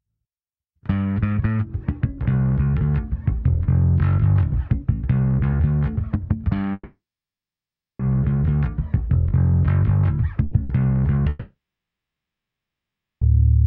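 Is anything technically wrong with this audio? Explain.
Yes. There are two long network dropouts and two bursts of packet loss.

From 6.73 to 8.02 s, and again from 11.29 to 13.24 s, the sound stops. A short fading buzz or hiss trails into about 1.0 s of silence the first time, and about 1.6 s the second time. This is likely a long network dropout: the receiver stretches the last sound, then gives up. The audio returns further on, with about 1.26 s and 1.92 s missing.

At 10.45 s and again at 10.63 s there is a brief held or fading smear. Each is a burst of packet loss. The receiver continued the last sound and turned it down across the gap. About 60 ms of audio is lost each time, so the sound jumps ahead when it resumes.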